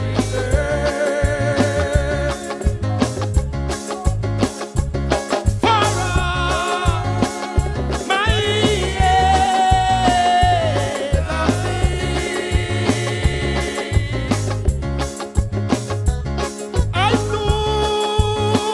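No technical faults can be heard anywhere in this audio.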